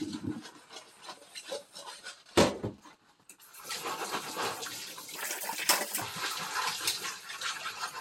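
From 1.99 to 2.95 s a faint galloping pattern of short 217 Hz buzzes sits under the sound: GSM signalling bursts from a nearby 2G phone, rectified by the audio circuit. From 5.16 to 6.02 s the audio turns high and hurried, playing 1.93 times too fast and roughly ten semitones up. This section at the wrong speed was likely fitted to the wrong clock.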